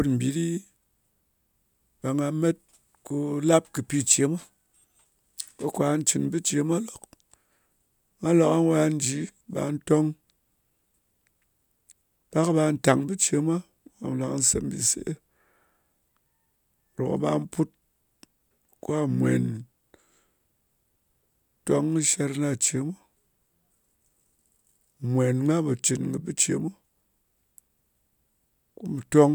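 No technical faults can be heard anywhere in the recording, and the signal stays steady and intact from its first moment to its last.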